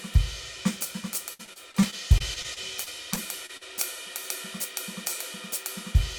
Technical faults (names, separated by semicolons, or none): repeated packet loss (robotic sound)